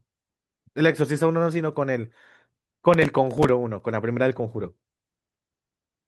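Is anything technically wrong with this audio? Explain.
Yes. From 2.94 s to 3.80 s the speech carries a burst of processor overload crackle. The processor fell behind and missed a run of buffer deadlines, and each miss was filled by replaying a fragment of old audio with abrupt edges. The tiny repeated slivers, each a few milliseconds long, produce a gritty, tearing crackle over the speech. The texture suggests something like fifteen missed buffers of roughly 3 ms each. It stops once the load clears.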